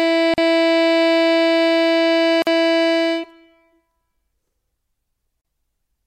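At 0.34 s, 2.42 s and 5.41 s the music drops out for 41, 47 and 35 ms. Each is a gap at a join of encoded pieces, where the encoder's start delay and end padding stayed in. Each is heard as a brief stutter before the music carries on. Waveform and spectrogram show a thin, empty vertical strip with smeared edges.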